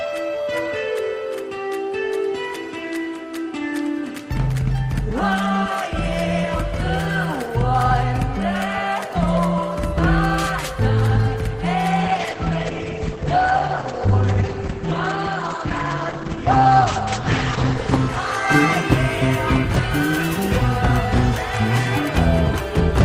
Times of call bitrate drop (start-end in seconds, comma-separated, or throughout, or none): 12.04-19.03